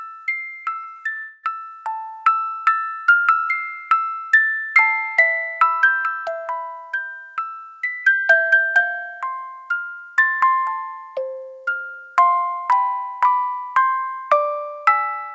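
The audio passes through a call path whose codec leaves nothing above 8 kHz. From 0.72 to 1.17 s, repeated packet loss produces choppy, robotic sound: four short holes, the longest 25 ms, are patched by extending the previous sound. At 1.17 s the sound turns into a smeared, fading continuation lasting about a quarter second until 1.45 s, most likely a long network dropout concealed without falling to silence.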